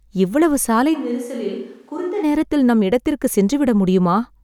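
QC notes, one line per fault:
0.96–2.22 s, switch to a distant microphone: the speech abruptly turns roomy and hollow, loses low end and drops about 10 dB, with room noise rising to roughly 35 dB below it. The close microphone likely dropped out, leaving a far pickup. The close sound returns just as suddenly.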